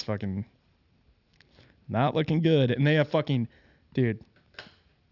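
Throughout the speech, sibilants turn gritty and metallic, with a faint harsh layer roughly 30 dB down and the spectrum running hard up to 6 kHz. This is aliasing: energy above that edge folded back to wrong frequencies, which fits unfiltered downsampling from 48 kHz to 12 kHz.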